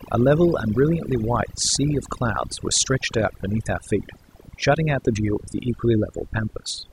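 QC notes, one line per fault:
Throughout: overdone noise removal. The noise reduction on this speech was pushed too hard, so individual frequency bands are pulled down or shut off whenever their level sits close to the tool's noise estimate. Low-level parts of the speech fall below that threshold and vanish along with the noise. The gaps between phrases drop to near silence scattered with twinkling specks.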